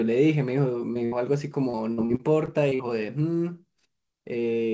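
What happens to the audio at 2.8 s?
At 2.8 s the audio is at the tail end of a run of repeated packet loss (robotic sound) spanning about 1.70 to 2.81 s. Seven holes, none longer than 40 ms, each get papered over by stretching the preceding sound, so about a fifth of that stretch is patched-in material. That gives a choppy stutter with pieces missing, unlike a single dropout, which would be one isolated gap. The call codec's 8 kHz ceiling is present throughout, not just here.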